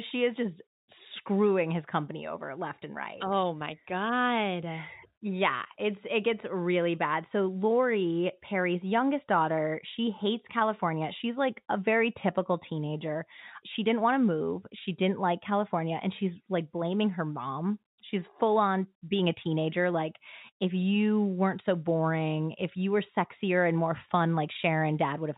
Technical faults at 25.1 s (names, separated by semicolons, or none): none